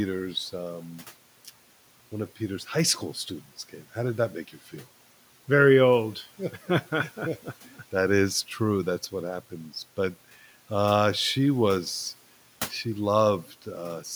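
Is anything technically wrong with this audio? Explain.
Yes. Speech cut by the noise suppressor occurs at 13.45–13.67 s, after "uh she was she". The suppressor mistook speech for noise and pulled it down about 10 dB for roughly a tenth of a second, so it sounds swallowed. This shows as a dip in the waveform envelope and a faded patch on the spectrogram.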